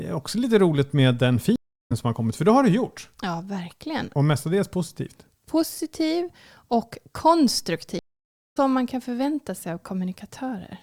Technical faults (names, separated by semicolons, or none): stream reconnect